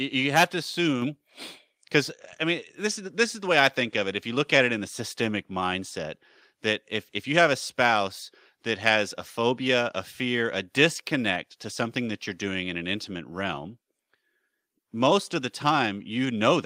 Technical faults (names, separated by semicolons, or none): microphone volume stepped up